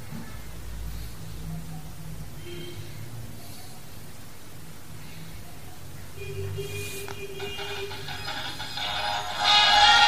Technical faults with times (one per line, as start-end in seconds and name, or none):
none